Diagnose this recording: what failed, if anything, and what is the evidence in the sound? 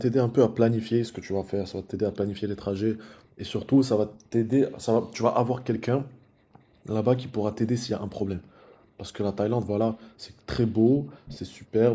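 Call processing: background gated by the echo canceller. The room sound ducks by up to about 40 dB in brief dips within 1.75–6.82 s, 8.37–8.98 s and 10.09–11.74 s, as suppression clamps the microphone.

Call processing: echo leak. Short delayed copies of the speech, about 281 ms late, surface at 5.74–5.79 s, 8.69–8.74 s and 11.25–11.39 s, likely residual loudspeaker pickup the canceller missed.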